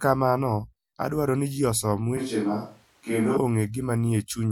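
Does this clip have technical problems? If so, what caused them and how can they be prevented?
Yes. Right after "adwaro ni ji osom", from about 2.17 s to 3.37 s, the speech turns roomy and hollow and loses its low end, then snaps back just as suddenly. That's a switch to a distant microphone; most likely the close mic dropped out and a farther one filled in. The level barely moves, and the room noise stays low, roughly 35 dB under the speech. To prevent it, secure the close mic's cable and connector and check its signal before recording.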